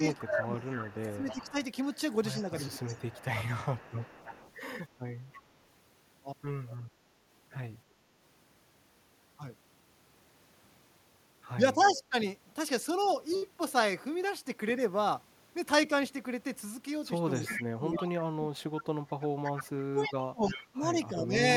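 Speech suppressed in double talk, 0.0 to 2.78 s: the voice dips by up to about 15 dB, around a second in total, likely because the echo canceller turned down its own talker while the far side spoke.

Echo leak, 0.12 to 5.41 s: a faint copy of the voice trails 322 ms behind, about 20 dB down, likely loudspeaker pickup the far end's canceller failed to remove.

Speech suppressed in double talk, 6.83 s: a brief 70 ms hole drops the voice by about 20 dB, likely the same double-talk attenuation.

Speech suppressed in double talk, 11.75 to 12.14 s: the level sags by about 10 dB for roughly 0.3 s, likely the canceller clamping during overlap. Inside it, an echo leak from 11.83 to 12.01 s returns a 322 ms delayed scrap about 20 dB down, likely residual loudspeaker echo.

Echo leak, 17.34 to 21.2 s: the 322 ms echo comes back much stronger, only about 10 dB below the voice, likely a larger failure of the far end's cancellation. 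Speech suppressed in double talk, 17.43 to 21.41 s, overlaps it. The voice is pulled down by as much as about 30 dB for roughly three seconds, likely because the canceller suppressed everything it could not separate.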